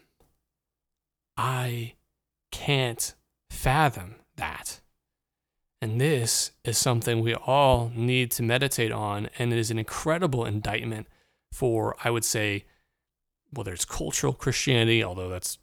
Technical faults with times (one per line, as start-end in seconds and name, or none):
1.38 dropped samples
4.69 dropped samples
6.24 dropped samples
7.73-7.76 loud pop
9.81 dropped samples
10.69-10.72 loud pop
14.14 dropped samples